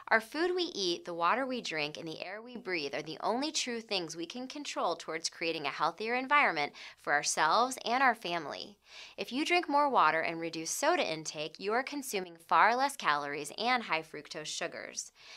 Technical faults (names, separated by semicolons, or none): sudden gain jump